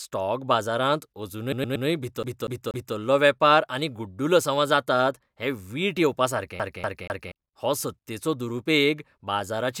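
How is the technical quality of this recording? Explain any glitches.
The recording has clear playback glitches: one frame-repeat stutter and two CD-skip loops.

Repeated frames, 1.51 to 1.86 s: a run of compressed frames was duplicated, so the decoder plays the same 116 ms block three extra times. This fits a small group of frames being written or sent more than once. It sounds like a quick stutter in the speech, and it lengthens the audio by about 0.35 s.

CD stuck on one turn, 2.23 to 2.95 s and 6.59 to 7.32 s, the second just before "हो सत्तेचो दुरुपेग": a scratch throws the laser back at the same point on each rotation. A 241 ms slice of speech repeats three times, with a brief mute at each jump, giving the fast, even stutter of a skipping CD.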